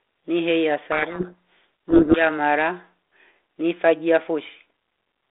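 A codec payload misread runs from 0.92 to 2.22 s: the receiving side unpacks the G.726 code words in the wrong bit order, so each ADPCM step is decoded wrongly and the speech sinks under harsh, grinding distortion until the packing agrees again, leaving the 32 kbit/s telephone-band sound.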